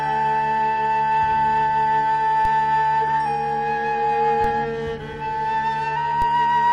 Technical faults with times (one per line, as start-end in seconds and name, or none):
2.45 DC step
4.44 DC step
6.22 DC step